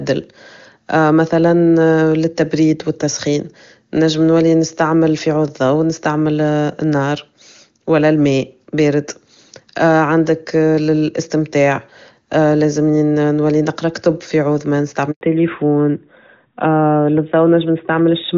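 At 15.11 s, just after "في عود ما", a handover gap cuts the speech for 100 ms, until 15.21 s. As the call switched networks no speech frames arrived, so the sound fades within a few tens of milliseconds and leaves dead silence, losing whatever was said in that interval.

From 15.21 s to the end the call falls back to narrowband. Before this the clear, wideband HD Voice sound fits a high AMR-WB rate. After it, everything above 4 kHz is gone, and the speech turns duller and rougher, consistent with a narrowband AMR codec.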